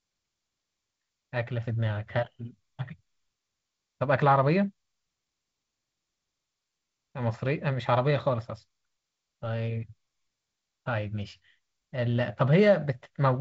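No technical faults can be heard anywhere in the speech, which comes through G.722 wideband telephone coding at 48 kbit/s with nothing above about 7.7 kHz.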